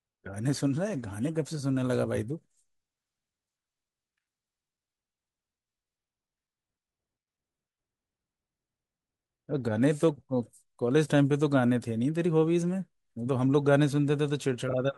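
Near the very end, from 14.68 to 14.74 s, frames out of order: two adjacent 24 ms blocks were decoded swapped, so the speech briefly flutters. Duration stays unchanged.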